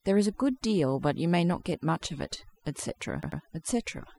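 Throughout the speech, overdone noise removal has pushed bands near the estimated noise floor down to nothing. Gaps fall to near silence sprinkled with twinkling specks. On a spectrogram the background shows scattered isolated dots, with ragged holes in the speech harmonics.

From 3.23 to 3.42 s, repeated frames make one 92.9 ms block play three times in a row, adding about 0.19 s. It is heard as a quick stutter. A spectrogram shows the same pattern tiled three times.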